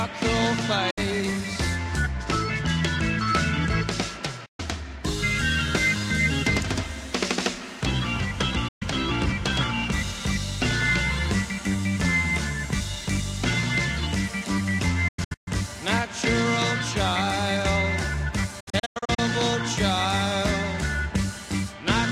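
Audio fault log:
0.90–0.98 s, digital broadcast dropout: about 64 ms muted after failed frames, with 8 ms fades; a short blank vertical band on the spectrogram, a flat gap in the waveform.
4.46–4.60 s, digital broadcast dropout: 128 ms hole, consistent with several lost 32 ms frames; the receiver mutes until good data returns, so the spectrogram shows a clean empty column.
8.68–8.82 s, digital broadcast dropout: another 128 ms mute with brief fade edges; the sound cuts out and resumes further on, with a flat waveform gap between.
15.08–15.48 s, digital broadcast dropout: a cluster of short holes totalling 288 ms across 384 ms, longest 128 ms; the sound stutters, shown as several narrow blank bands.
18.60–19.19 s, digital broadcast dropout: scattered mutes totalling 320 ms over 576 ms, longest 96 ms; a choppy stretch, with the waveform broken by repeated flat gaps.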